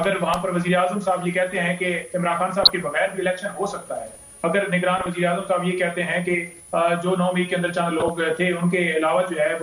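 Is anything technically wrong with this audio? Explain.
Yes, two faults can be heard.

A switching supply whistle runs through the whole clip as a thin, high tone near 10 kHz, wandering between about 9.55 and 10.2 kHz, roughly 25 dB below the programme. A switch-mode power supply is cycling within hearing range, and its frequency shifts as the load on it changes. On a spectrogram it shows as a faint horizontal line that drifts slightly in height across the entire clip.

DAB burbling occurs at 2.61 to 2.82 s, 4.97 to 5.09 s and 7.86 to 8.17 s, as brief patches of blipping, burbling noise over the sound. Weak reception is letting bit errors, on the order of half a percent, slip past error correction into the MP2 stream. Corrupted samples put short blips of noise in single sub-bands, and corrupted scale factors make individual sub-bands jump in level for up to a frame. A spectrogram shows scattered rectangular blocks of energy in separate frequency bands over those spans, and the waveform shows small, irregular bursts.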